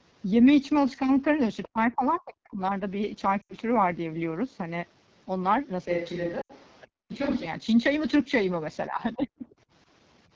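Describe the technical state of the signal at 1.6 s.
At 1.63 to 1.68 s, faint other-side voice leaking through, about 20 dB below the talker, likely residual loudspeaker echo the canceller missed. It shows as a brief, weak overlapping harmonic trace.

From 1.66 to 2.6 s, speech is suppressed in double talk. The talker's level plunges, at worst by around 40 dB, over most of that stretch, likely the echo canceller ducking both voices. The waveform envelope collapses in patches, and the spectrogram thins.

Throughout, the AMR wideband (HD Voice) codec damage is plainly audible as rough, raspy speech, which fits the lowest rates near 8.85 kbit/s. On a spectrogram it shows noisy fill between 6.4 and 7 kHz.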